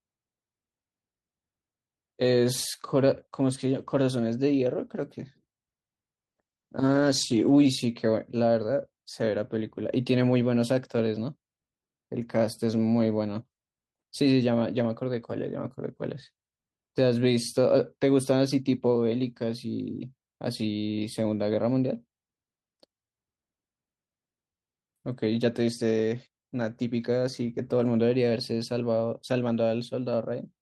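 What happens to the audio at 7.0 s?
At 7.0 s the speech is inside a call bitrate drop running from 6.31 to 7.71 s. The connection's bandwidth estimate fell, so the encoder was forced to spend far fewer bits. The sound points to a drop from about 32 kbps to about 13 kbps, held at its lowest for roughly 1.3 s. Coding becomes coarse. The top end is trimmed away. The speech turns rough and muffled until the rate recovers.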